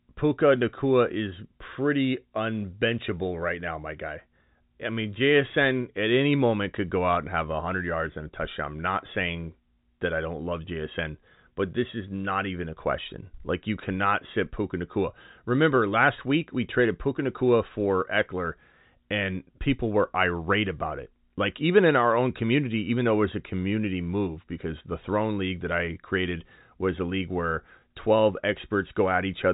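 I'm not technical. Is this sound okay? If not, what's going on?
Yes, nothing is wrong with this speech; the narrow, phone-like tone, with nothing above about 3.8 kHz, is simply how ordinary G.711 telephone coding sounds.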